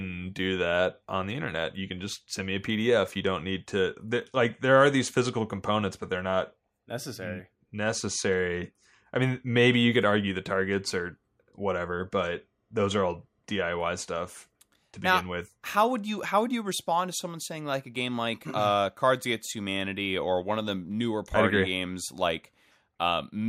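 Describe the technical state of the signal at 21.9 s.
At 21.9 s the speech signal is intact, with no audible fault at that moment.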